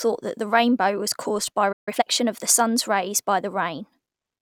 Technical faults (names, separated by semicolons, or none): playback stall; time-compressed catch-up